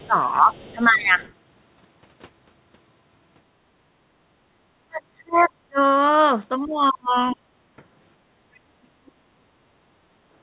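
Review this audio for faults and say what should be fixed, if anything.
Speech suppressed in double talk occurs four times: 0.04–1.21 s, 4.87–5.79 s, 6.6–7.5 s and 8.61–9.28 s. In each span the talker's level sinks for roughly 0.7 s in total, by about 15 dB in the first instance and by about 35 to 40 dB in the later three. The likely cause is an echo canceller that could not tell near-end speech from loudspeaker echo while both sides were active, so it attenuated everything. Tuning the canceller's double-talk detection, with less aggressive nonlinear suppression during overlap, would prevent this.

The other side's voice leaking through appears as faint scraps at 0.54–0.74 s and 1.21–1.32 s, about 30 dB below the talker. A briefer fragment at 8.55–8.59 s sits about 40 dB down, just before the last suppression. These fragments are residual loudspeaker signal that the canceller likely failed to fully subtract from the microphone path. 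Improving the echo-path model's convergence and adding residual echo suppression would prevent it.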